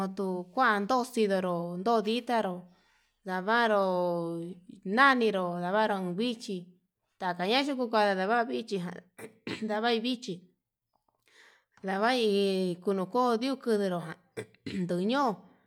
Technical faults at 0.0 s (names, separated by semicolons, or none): none